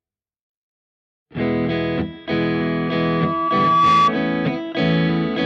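From 2.53 s to 4.13 s a loudspeaker feedback squeal appears: the microphone re-captures its own loudspeaker, and at 1.2 kHz loop gain exceeds unity. The tone swells over roughly a second and a half, ending around 5 dB above the surrounding sound.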